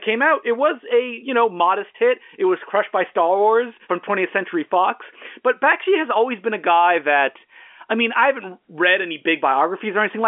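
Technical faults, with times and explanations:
No technical faults detected; the speech carries the expected G.711 telephone coding, with the band running from about 250 Hz to 3.4 kHz and nothing above about 3.7 kHz.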